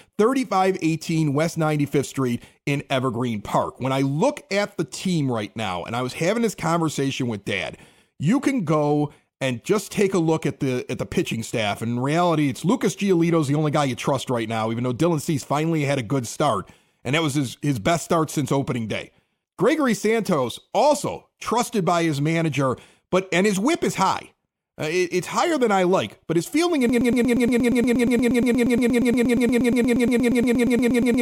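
At 26.89 s the speech suddenly stops moving forward and locks into a stutter: a fragment about 118 ms long repeats exactly, back to back, roughly 37 times, and the stutter continues to the very end of the clip at 31.2 s. This is a broken-record loop, likely caused by the player, encoder or stream stalling and resending the last chunk it held, so the remaining four seconds or so of speech are lost.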